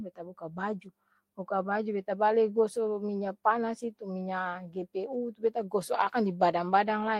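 No technical faults can be heard anywhere in the speech recording.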